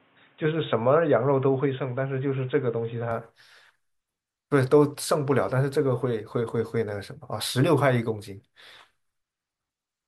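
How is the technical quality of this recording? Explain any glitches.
The first three seconds are band-limited, then the recording opens up. From 0 to 3.11 s the speech is dull and boxy, with nothing above 3.8 kHz, and it carries a faint noise floor well below the speech. At 3.11 s it turns full-range with no gap and no obvious jump in loudness. This fits an input switched to a poorer device, likely a lower-bandwidth microphone or headset call profile. A spectrogram shows a flat ceiling at 3.8 kHz that lifts abruptly, while the waveform envelope stays even.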